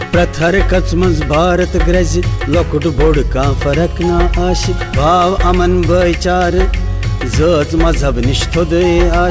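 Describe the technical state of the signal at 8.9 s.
At 8.9 s the signal is intact, with no fault present, just the steady band-limited sound of the WebRTC call path, whose G.722 coding leaves nothing above 8 kHz.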